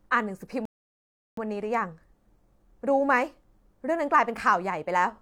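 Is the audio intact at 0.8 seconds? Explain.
No. At 0.8 seconds the speech has dropped to silence, partway through a gap that runs from 0.65 to 1.37 s. When it comes back, it picks up exactly where it broke off, with nothing skipped, so the only damage is about 0.72 s of added dead air. This is a rebuffering stall: the player used up the audio it had downloaded and paused playback until more data arrived.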